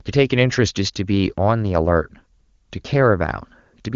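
No technical faults are present in the speech; it passes through the AMR wideband (HD Voice) codec at its top rate of 23.85 kbit/s with little or no audible coding damage, and its content stops near 7.3 kHz, as that wideband path allows.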